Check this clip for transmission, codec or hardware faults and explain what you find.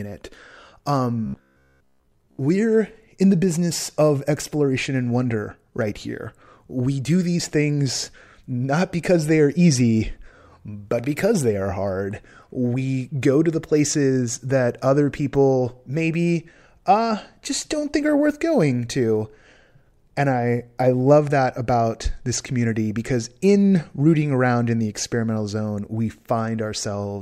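One fault appears, early in the speech: robotic sound from repeated short buffers, from 1.26 to 2.42 s. For that stretch the speech becomes a rigid, metallic buzz fixed at about 66.8 Hz, still loosely following the words. The likely cause is audio arriving too seldom, so the playback side loops a chunk of about 15 ms to fill the gaps while most of the real audio is dropped. Unlike plain dropouts, there is no silence, only a steady mechanical drone.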